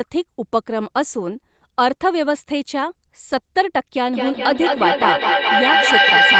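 A feedback loop between two devices on the same call in one room, with the microphone re-capturing the other loudspeaker and gaining level on each pass, turns this speech recording into a feedback howl from 4.08 s to the end at 6.39 s. The tone settles near 1.5 kHz, pulses roughly every fifth of a second with the loop delay, and peaks about 5 dB above the speech. Throughout, content stops at 8 kHz, consistent with a wideband Opus call path.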